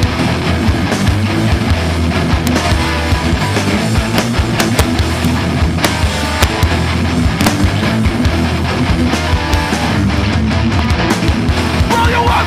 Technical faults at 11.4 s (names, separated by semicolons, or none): none